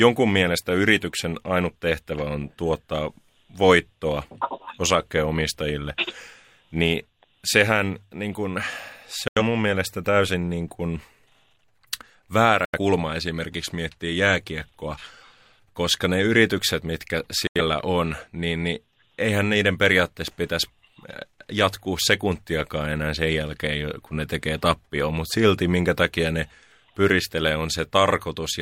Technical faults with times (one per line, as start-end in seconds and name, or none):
9.28-9.42 digital broadcast dropout
12.65-12.78 digital broadcast dropout
17.47-17.61 digital broadcast dropout